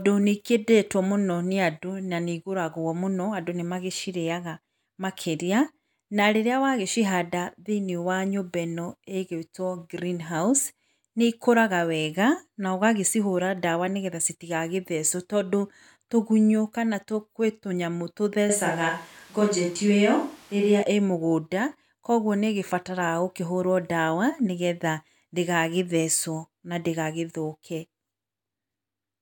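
A speech recording where, from 18.50 to 20.82 s, the close microphone's signal likely dropped out and a switch to a distant microphone took over. The voice turns abruptly roomy and hollow with thinner bass, holding roughly the same level, while room noise rises to around 30 dB below the speech before the close sound snaps back.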